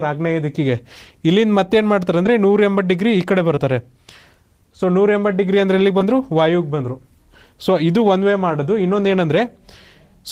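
Three brief dropouts, at 2.23–2.27 s, 3.55–3.59 s and 5.99–6.02 s, are short concealed packet loss: about 20 ms went missing each time, and the receiver patched it by extending the preceding sound before crossfading back. A spectrogram shows a slightly smeared, repeated slice, and the waveform shows a subtle discontinuity.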